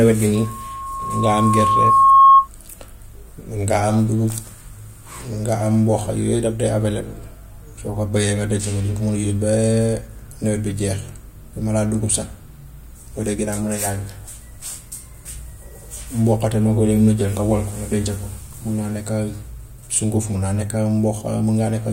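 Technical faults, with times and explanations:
0.35–2.48 s, loudspeaker feedback squeal: a 1.1 kHz tone swells over about two seconds to about 15 dB above the speech as the mic-speaker loop exceeds unity gain; spectrogram shows one brightening horizontal line.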